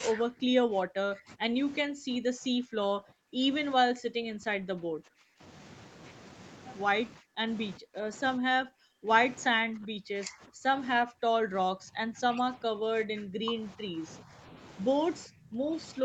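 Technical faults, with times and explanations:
0.11–3.43 s, 3.77–5.42 s, 7.16–7.46 s, 7.78–9.09 s, 9.5–14.57 s and 15.27–16.05 s, speech suppressed in double talk: the voice repeatedly dips by roughly 20 to 40 dB and breaks up, likely because the echo canceller mistook it for loudspeaker echo while the far side talked and pulled both down.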